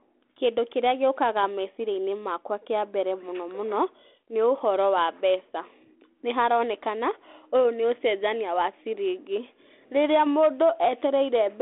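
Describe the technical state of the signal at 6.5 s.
At 6.5 s the signal is intact, with nothing beyond the light, band-limited character of the 32 kbit/s G.726 ADPCM telephone path that carries the whole clip.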